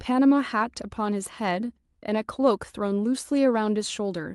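Speech, with no technical faults to be heard.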